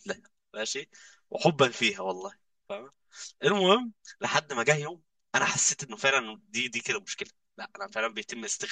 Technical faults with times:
0.00-8.71 channel delay (comb filtering)

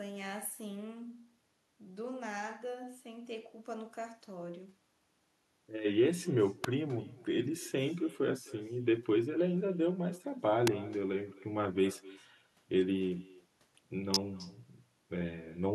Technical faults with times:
0.00-15.74 echo with no canceller
6.64 electrical switching spike
10.67 electrical switching spike
14.14 electrical switching spike

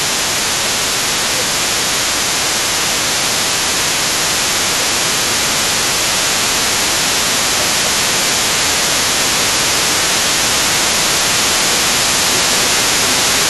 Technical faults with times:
0.00-6.21 speech suppressed in double talk
0.00-13.49 other side's voice leaking through
6.85-8.50 speech suppressed in double talk
8.87-13.49 speech suppressed in double talk

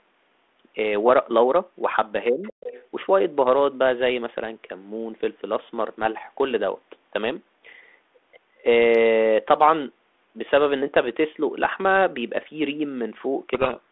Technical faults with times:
2.31-2.52 speech suppressed in double talk
2.43-2.83 other side's voice leaking through
13.54-13.90 codec payload misread

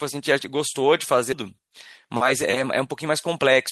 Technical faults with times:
1.32 skip ahead
2.05-2.55 jitter buffer speed-up

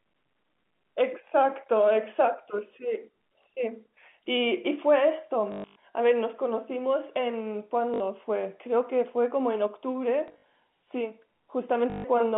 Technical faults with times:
5.52-5.76 packet loss with last packet repeated
7.94-8.00 packet loss with last packet repeated
10.28-10.44 packet loss with last packet repeated
11.90-12.04 packet loss with last packet repeated

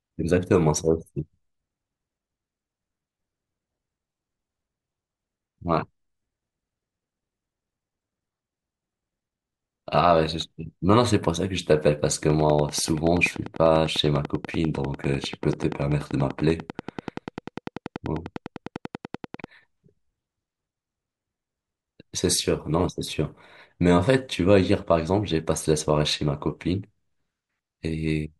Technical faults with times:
12.30-19.45 train of clicks

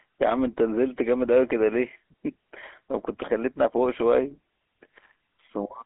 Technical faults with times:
0.00-5.85 GSM full-rate codec

